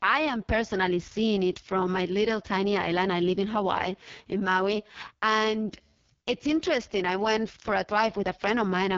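Speech runs through the whole clip with a rough, raspy, buzzy texture and a dull top end: nothing is present above about 7.2 kHz, and the highest band sounds hissy rather than detailed. This is AMR wideband (HD Voice) codec damage, and it is heavy. The codec rebuilds the voice from a pulse-excited vocal tract model and fills its top band with shaped noise. At a rate this starved, which fits the lowest 6.6 kbit/s mode, that model becomes coarse enough to rasp.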